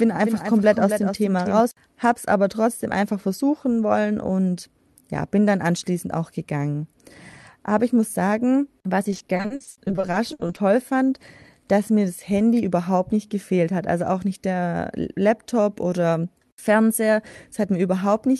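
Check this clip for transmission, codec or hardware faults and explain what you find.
Two faults stand out.

From the start to 1.60 s, a doubled audio track is heard. A copy about 10 dB quieter trails by around 300 ms, then stops abruptly. It is likely from a second, slower capture path.

From 9.04 to 10.57 s, repeated packet loss makes the sound choppy and robotic. Many short gaps, the longest 60 ms, are patched by stretching the last sound. About a third of that stretch is concealed.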